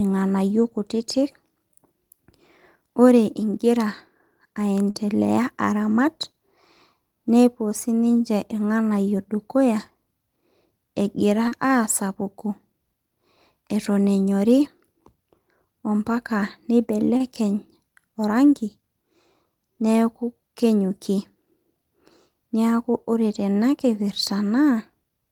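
Speech clip with three faults. Short concealed packet loss occurs twice: about 40 ms of audio at 4.90 to 4.95 s and 30 ms at 11.48 to 11.52 s never reached the decoder in time, so the receiver carried the preceding sound forward and blended back, leaving a brief smear or wobble where a short sound may drop out. At 17.17 to 17.21 s, a short stall from a late packet emptied the jitter buffer, and the receiver stretched the last sound for about 27 ms until it arrived. Nothing is lost, but that sound lingers slightly too long with a faint buzz or dip.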